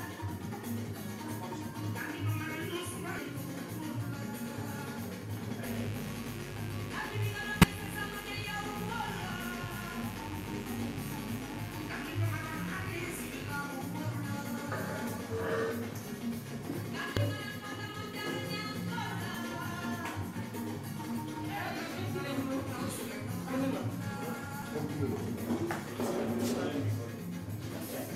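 There's a steady, raspy mains buzz from 5.64 to 13.58 s, sitting roughly 10 dB under the audio. It's 50 Hz hum with sharp switching spikes twice per cycle, the kind a dimmer, rectifier or missing shield lets in, so harmonics climb well up into the kilohertz range. On top of that, damaged data in a compressed stream shows up as short chirps or blips at 7.60 to 7.64 s, 17.17 s, 19.34 s and 24.59 to 24.63 s. Bad bytes there make the decoder misread frames and lose sync until it finds the next good frame header.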